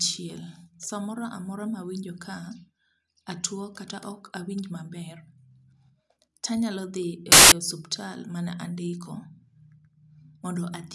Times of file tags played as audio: 7.32-7.52

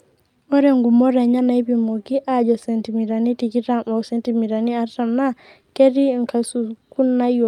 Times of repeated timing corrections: 0.18-7.11

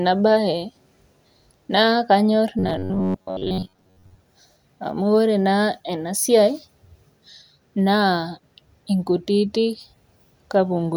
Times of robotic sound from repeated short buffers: 2.59-4.20

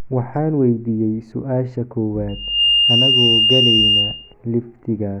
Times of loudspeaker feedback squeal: 2.29-4.34

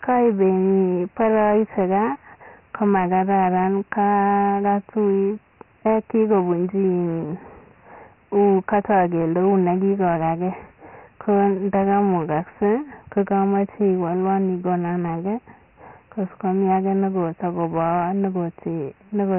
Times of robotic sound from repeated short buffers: none

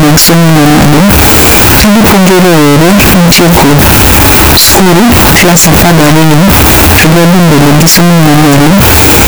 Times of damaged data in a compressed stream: none

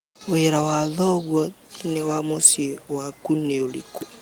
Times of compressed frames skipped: none

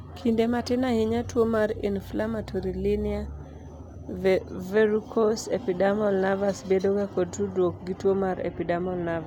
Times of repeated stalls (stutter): none

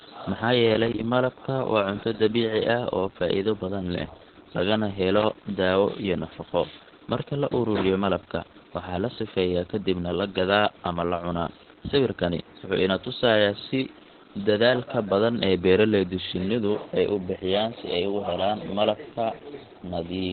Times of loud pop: none

